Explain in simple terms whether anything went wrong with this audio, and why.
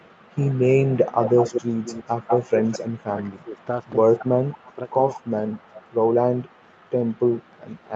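Echo leak: a delayed copy of the speech, about 0.19 to 0.26 s behind, likely from a loudspeaker echo the canceller missed. It is faint at 0.0 to 0.36 s, 3.36 to 3.9 s and from 4.89 s to the end, but strong at 1.14 to 3.04 s.

Speech suppressed in double talk: the talker's speech dips or cuts out at 3.13 to 3.59 s, 4.18 to 4.8 s and 5.16 to 5.83 s, likely because the canceller turned it down along with the echo. Unlike the echo leak, nothing is added. Sound is taken away.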